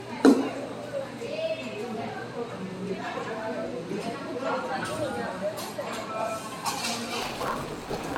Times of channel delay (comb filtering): none

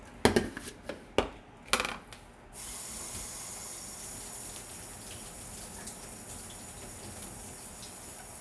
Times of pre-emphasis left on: none

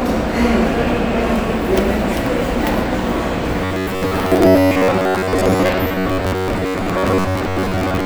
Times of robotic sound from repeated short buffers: 3.65-8.06

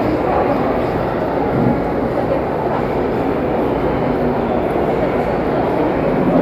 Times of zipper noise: none

